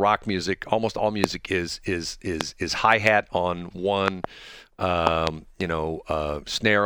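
Loud pops break into this speech clip at 1.24 to 1.26 s, just before "is is", and at 2.41 to 2.43 s, between "is is" and "is hi hat on". Double pops follow at 4.08 to 4.26 s, after "is hi hat on", and at 5.07 to 5.29 s. Each peaks around 20 dB above the speech, which carries on underneath. They are likely sudden voltage steps, from a plug, switch, static or driver glitch, shaped into sharp thumps by the circuitry downstream.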